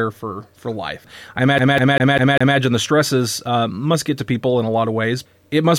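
From 1.58 s to 2.58 s the audio is a CD stuck on one turn. A scratch keeps sending the laser back one track. The same 0.2 s of sound plays five times, with a short mute at each jump. It makes a fast, even stutter.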